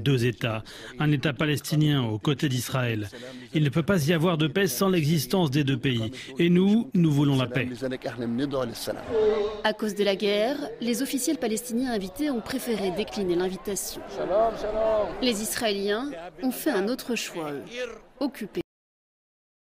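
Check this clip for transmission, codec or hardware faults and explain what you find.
There's one fault here: a cut-off end. At 18.61 s the audio just stops mid-sound and falls straight to digital silence for the last second or so, with no decay at all. The final buffers never got written or played out, so the tail simply vanishes.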